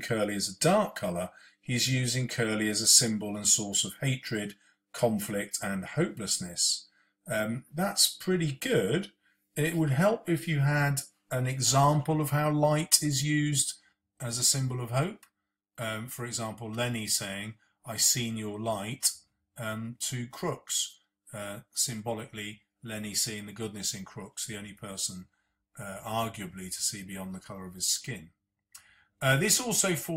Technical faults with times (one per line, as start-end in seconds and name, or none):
13.93-30.17 one channel drops out